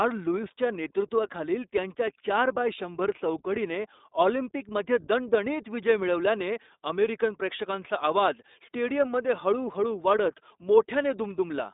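The iLBC codec runs through the whole clip. It is a narrowband VoIP codec. Nothing above about 3.8 kHz survives, and the low end thins below roughly 250 Hz, so the speech sounds boxed in, like a phone line. Each short frame's excitation is coded on its own, without help from the frame before. That leaves a plainly audible rough, synthetic grain. The texture fits 20 ms frames at the codec's 15.2 kbps mode.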